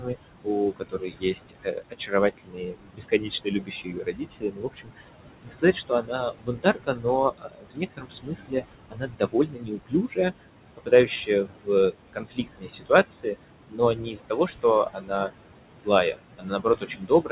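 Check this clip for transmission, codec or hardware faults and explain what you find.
Two faults are audible, both from the noise suppressor rather than from transmission or hardware. The call path is G.711 mu-law at 64 kbps, with nothing above 4 kHz, and the room noise sits about 9 dB below the speech.

Noise suppressor artifacts run throughout. Bands judged to be steady noise are pulled down by about 21 dB, frame by frame, so the background sinks in pauses and swells under speech. On a spectrogram the noise floor looks patchy and speckled.

Speech cut by the noise suppressor occurs at 0.0–5.07 s, 5.43–10.46 s, 10.77–13.36 s, 13.68–15.3 s and from 15.75 s to the end. The suppressor mistakes quiet speech for noise and drops it by about 18 to 22 dB, so consonants and word endings sound swallowed. The waveform shows syllable tails collapsing.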